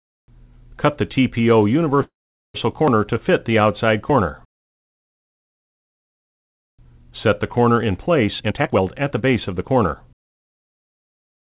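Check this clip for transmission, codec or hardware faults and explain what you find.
Two faults stand out. The sound passes through a narrowband call path with nothing above 4 kHz, which fits G.711 mu-law.

Call audio freeze, 2.02 to 2.56 s: the sound stalls for about 0.52 s, mostly silent for 0.44 s, then resumes intact. Delayed packets likely emptied the jitter buffer.

Jitter buffer speed-up, 8.28 to 10.79 s: the sound runs hurried at 120% speed, same pitch. The buffer trims repeated pitch-period slices, dropping roughly half a second.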